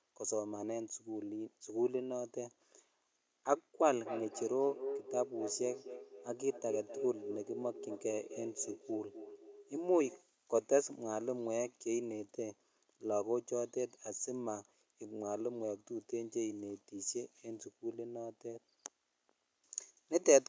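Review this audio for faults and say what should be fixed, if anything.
A feedback echo between two devices occurred: two devices in one room played each other's microphones, so each device's echo canceller missed the loop. From 3.9 to 10.33 s, speech repeats roughly every 300 ms, thinner and ringing each time, peaking about 8 dB below the direct speech. To prevent it, only one device in a shared room should have its microphone and speaker active, or everyone should wear headphones.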